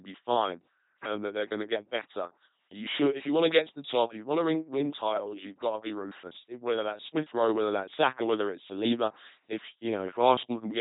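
From start to finish the speech passes through an LPC-10 vocoder, heavily damaged, which fits a 2.4 kbit/s coder. Each frame excites a short filter with either a buzzing pulse train or hiss, producing a robotic tone. A spectrogram shows evenly spaced buzz harmonics, noise patches, and nothing above 3.9 kHz.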